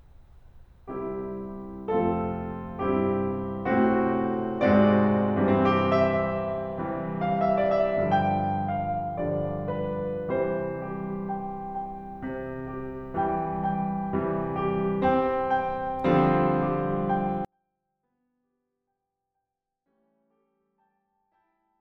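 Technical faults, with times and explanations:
17.45–21.81 s, 24-bit alignment error (too quiet): 24-bit samples in the low bytes of 32-bit words read as full 32-bit values, so the music stays clean but falls about 48 dB, nearly inaudible.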